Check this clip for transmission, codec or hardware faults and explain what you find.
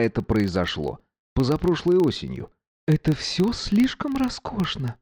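There is one fault, present throughout: a filter restarted on every block. The filter loses its memory at each block boundary and begins again from silence, leaving a tiny transient every 40 ms. That produces a 25 Hz buzz that rises and falls with the audio's level. A waveform shows evenly spaced small glitches, and a spectrogram shows faint vertical stripes at that rate.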